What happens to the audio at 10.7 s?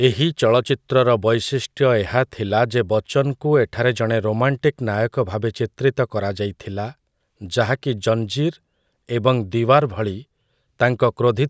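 At 10.7 s the speech carries on intact, with no dropout, click, distortion or other fault at that moment.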